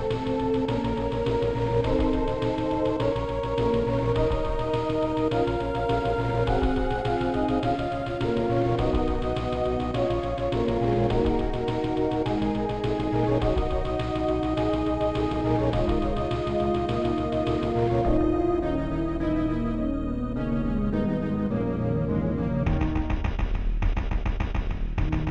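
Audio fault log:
Throughout: doubled audio track, a second full-band copy trailing by about 150 ms, roughly 5 dB down, with no decay or room colour, likely from a duplicate capture path.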